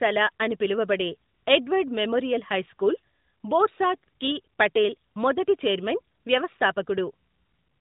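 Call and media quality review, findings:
No faults found in this clip.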